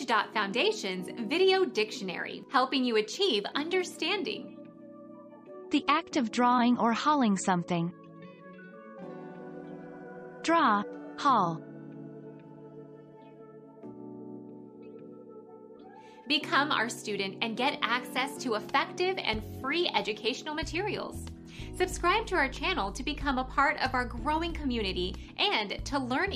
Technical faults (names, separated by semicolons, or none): none